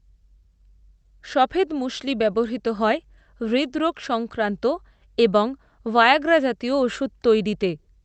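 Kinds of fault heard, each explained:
No faults can be heard in this speech clip: it comes through a call path with ordinary low-level coding noise and a top end that stops around 8 kHz, consistent with a wideband Opus setting.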